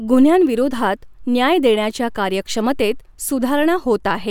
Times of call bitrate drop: none

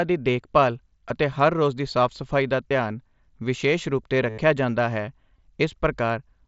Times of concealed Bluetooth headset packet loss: 1.08, 2.69, 4.29-4.38, 5.38

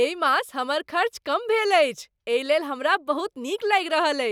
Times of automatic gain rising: none

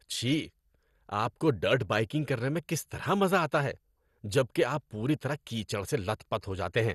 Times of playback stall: none

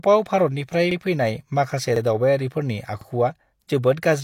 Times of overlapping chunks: 0.91-0.96, 1.96-2.01, 3.01-3.06

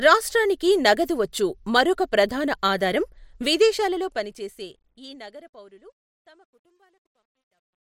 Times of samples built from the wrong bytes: none

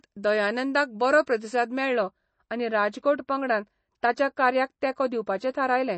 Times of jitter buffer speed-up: none

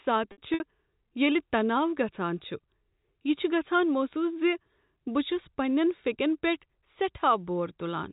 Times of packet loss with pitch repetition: 0.32-0.60

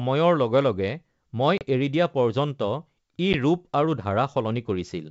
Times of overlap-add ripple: none

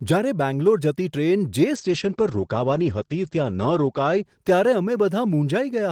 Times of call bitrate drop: 1.76-5.07

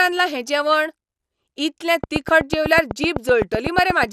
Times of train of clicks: 2.04-4.04

